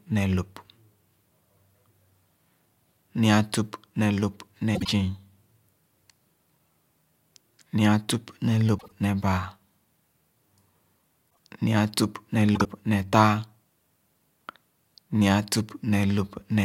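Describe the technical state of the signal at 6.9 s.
At 6.9 s the speech signal is intact, with no technical fault present at that moment.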